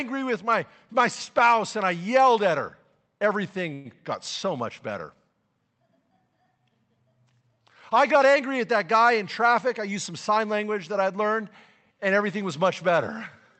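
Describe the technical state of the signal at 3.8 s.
At 3.8 s you're right inside a call audio freeze, running from about 3.73 to 3.87 s, just before "got so much better". The sound hangs on its last bit as a fading buzzy smear for roughly 115 ms, likely because packets stalled and the jitter buffer ran dry. When they arrive, the speech picks up where it stopped, so nothing is lost, but everything after lands about 115 ms later.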